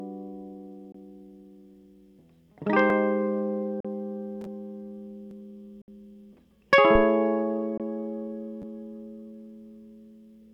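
At 0.92 s the music cuts to silence for about 20 ms and then resumes further along, as if it had kept playing. This is a Bluetooth dropout, likely a late radio packet discarded before the headphones could play it. The same gaps return at 3.80 s (41 ms) and 5.82 s (61 ms), lengths that fit roughly two and three lost packets.

At 2.90 s a tiny slice plays twice with a hard join, heard as a brief click-like stutter. This is a repeated buffer: fresh audio arrived late, so the last block of about 10.7 ms, which fits a 512-sample buffer, was replayed. Almost nothing is skipped. It recurs at 5.31 s.

From 6.95 s to 7.07 s a deep thump breaks in, decaying over about 25 ms. This is a phantom power thump, a supply switched on or off on a live input whose voltage step punched through the coupling capacitors.

At 7.78 s another 20 ms Bluetooth dropout silences the music.

At 8.62 s the stutter returns as the repeated buffer plays twice more, a slightly longer buzz.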